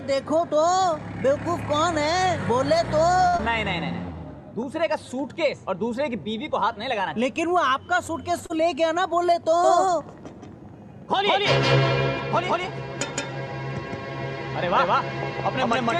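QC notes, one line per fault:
3.27–3.35 s, short stall from a late packet: the sound holds for about 56 ms, as if frozen, then resumes exactly where it left off. Nothing is lost, unlike packet loss; the packet arrived late, so everything afterward runs 56 ms later.
3.37–3.41 s and 8.46–8.51 s, short concealed packet loss: brief smears where audio never arrived. The first gap is about 20 ms, bridged with 16 ms of continued sound. The second gap is about 40 ms, bridged with 35 ms. Unlike a stall, real material is gone, so short sounds can vanish.
9.64 s to end, doubled audio track: from 9.64 s a second full-band copy of the audio starts abruptly and runs to the end, about as loud as the original and trailing it by roughly 150 ms. It has no decay or room colour, which separates it from an echo or reverb. The likely cause is a second, slower capture path mixed in alongside the first.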